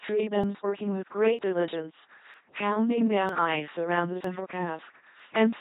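Throughout the speech, a channel delay (doubling) places a second copy of the sound 40 ms behind the first at equal level, so everything has a doubled, slapback edge. On the waveform each onset repeats 40 ms later. On a spectrogram the summed copies leave fine comb notches spaced 25 Hz apart.

Also throughout, the LPC-10 vocoder at 2.4 kbit/s turns the speech into a heavily damaged, buzzing robot tone, with hiss or buzz bursts where it judges voicing wrongly. The spectrogram is empty above 3.8 kHz and shows rigid, evenly spaced pulse harmonics over blurred formants.

Short skips occur at 0.44, 1.39, 2.34, 3.29, 4.24 and 5.20 s, about once a second. Each drops around 50 ms, and the two sides are spliced together without silence. The likely cause is audio missing between chunks, lost as a recorder closes one block and opens the next. The waveform shows an abrupt discontinuity at each join, and the spectrogram shows a thin vertical seam.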